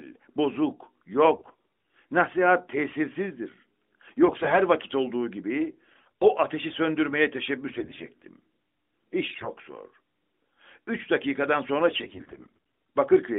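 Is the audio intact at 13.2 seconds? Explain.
Yes, the speech is intact at 13.2 seconds, with no fault at that moment beyond the narrowband character of the AMR-NB mobile codec path it passes through.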